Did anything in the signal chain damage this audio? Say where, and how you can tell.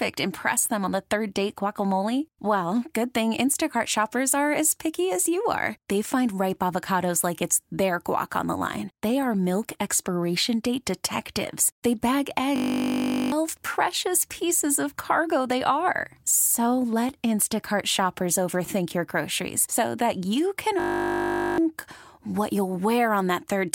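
Yes: a system hang loop at the driver or buffer stage. Twice, the host stalled while the audio hardware kept replaying its ring buffer: from 12.56 to 13.32 s, just before "precious pieces of cargo", and from 20.8 to 21.58 s, right after "so that you can". Each time one 20 ms slice repeats dozens of times, which fits a 20 ms buffer. That produces a steady 50 Hz buzz and loses most of a second of the sound.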